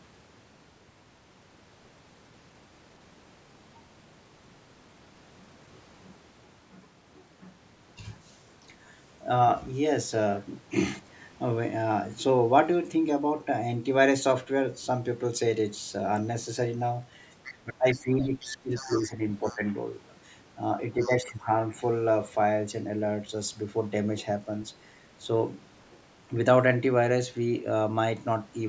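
At 17.44 s a faint second voice slips in for about a tenth of a second, roughly 20 dB under the main talker. This is the other side's voice leaking through, most likely because the talker's loudspeaker playback reached the microphone and the echo canceller left part of it behind. It returns more strongly from 17.94 to 19.03 s, about 15 dB down, then weakly from 19.43 to 19.73 s.

Overlapping that stretch, from 17.62 to 19.62 s, the main talker keeps dipping and thinning, losing up to around 15 dB in pieces that add up to about a second. This is speech suppressed in double talk: with both sides speaking together, the canceller likely couldn't tell its own talker from the echo and turned everything down.

The same pairing recurs later. From 20.92 to 21.49 s the talker drops by up to about 10 dB for roughly 0.4 s. Inside that window, from 21.01 to 21.31 s, the leaking far-end voice is at its loudest, only about 10 dB below the speech.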